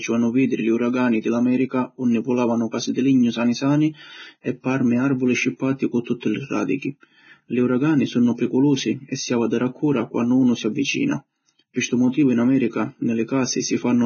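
From start to finish the speech has most likely passed through a Vorbis encoder set to a very low quality, which fits a bitrate of around 16 kbps. With so few bits, the encoder discards everything above about 6.6 kHz and quantises the remaining treble so coarsely that its detail is replaced by noise of similar energy. The result is heavy Vorbis compression damage: a dull, band-limited top, a hissy, grainy texture, roughened tones and softened attacks.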